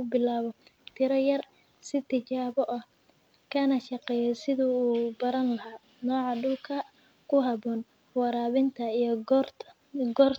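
No technical faults can be heard anywhere in it.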